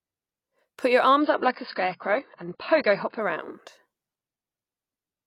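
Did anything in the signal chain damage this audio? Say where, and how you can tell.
Yes, at the network/streaming stage: from 1.21 to 3.21 s the speech abruptly loses everything above about 5.1 kHz and turns swirly, with no gap. That's an adaptive stream at a lower bitrate. The player switched to a starved AAC rendition, which fits something like 16 kbit/s, then switched back.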